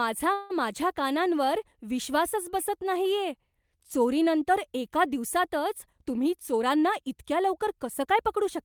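At 0.33 s the speech stops moving forward and the last sound is drawn out as a fading buzzy hiss for about 165 ms, until 0.52 s. It never drops fully to silence, and when the speech resumes it picks up exactly where it left off, with nothing skipped. This is a call audio freeze, likely caused by packets being held up in transit so the jitter buffer ran dry. The receiver covered the wait by extending the last sound, adding a 165 ms delay.

From 5.92 s to 8.57 s the speech sounds rushed, running about 6% faster while its pitch stays the same. This is a jitter buffer speed-up. The buffer was holding more audio than its target, as happens after delayed packets arrive together. To catch up, the receiver repeatedly cut out short slices one or a few pitch periods long. Across that stretch it removed roughly 150 ms of audio, which is why the delivery feels hurried.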